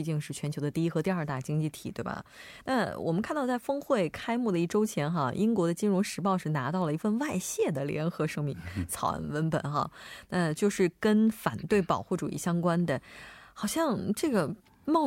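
A speech recording with nothing technically wrong to report.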